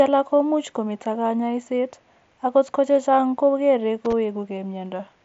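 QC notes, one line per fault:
4.05–4.13 s, loose connector crackle: just after "ko chechang' ko kere" the speech breaks into a short, ragged burst of scratchy crackle lasting about 80 ms. A worn or dirty contact somewhere in the line is flickering between connected and open as it shifts, chopping the signal on and off, and any DC on the line turns each break into a click. It is heard through the headset's wideband path, which stops at about 7.7 kHz.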